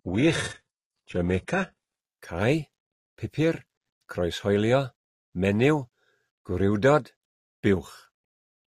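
For the first 2.0 s the speech has that thin, swirly top end of an adaptive stream starting at a low bitrate, with synthetic-sounding treble and stronger codec artefacts that fit a very low-rate HE-AAC stream. At 2.0 s it snaps up to a fuller version with no gap.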